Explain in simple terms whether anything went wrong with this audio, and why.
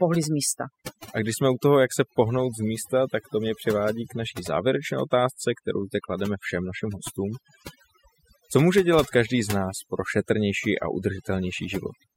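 Overdone noise removal runs through the whole of this speech clip, from start to finish. A cleanup tool meant to strip out background noise was pushed much too hard. It chops away any slice of the sound that resembles its idea of noise, and the softer parts of the voice get cut along with it. That's why the gaps between phrases fall to an odd near-silence sprinkled with tiny twinkling chirps.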